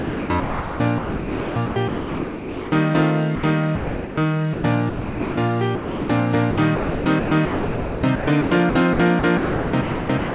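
From the start to 2.9 s, the sound is chopped by the voice detector, likely because the sender's detector kept switching between sending and muting, so that about 2.2 s of that stretch is comfort noise rather than real signal. Quieter passages and the edges of louder ones vanish, all within the narrow band of the call path, which carries nothing above 4 kHz.

Five separate stretches of sound are dropped by the voice detector. Each time, the detector likely judged quiet material to be background and stopped transmitting, and the receiver played steady comfort noise in its place. The gaps fall at 3.35 to 3.43 s (80 ms), 3.75 to 4.17 s (420 ms), 4.53 to 4.63 s (100 ms), 4.89 to 5.37 s (480 ms) and 5.75 to 6.09 s (340 ms). The sound gives way to even noise and resumes when the detector triggers again at each point.

From 6.51 s to the end, the chopping returns, likely from the same detector switching on and off again. 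About 2.25 s of this final stretch is replaced by comfort noise. The result is broken and stuttering.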